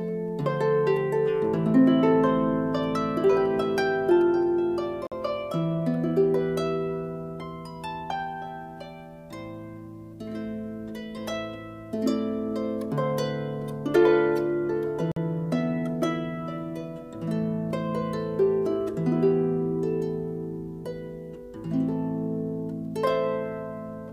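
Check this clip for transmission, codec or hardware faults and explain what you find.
A gap between chunks interrupts the sound twice, at 5.07–5.12 s and 15.12–15.16 s. Audio delivered in 10-second chunks has 48 ms of silence inserted at each join, so the sound is briefly interrupted, leaving a short hole at each join.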